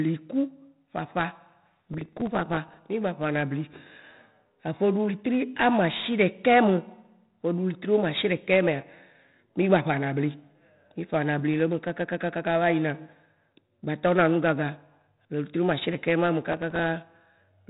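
Speech carries heavy 4-bit ADPCM compression throughout: gritty, level-following hiss and nothing above 3.8 kHz, a flat spectrogram ceiling that fits a 32 kbps, roughly 8 kHz stream. From 1.71 to 2.77 s, processor overload crackle appears as dozens of missed buffers of a few milliseconds each, refilled with stale audio. On the waveform and spectrogram these show as a dense run of hard-edged discontinuities and vertical clicks.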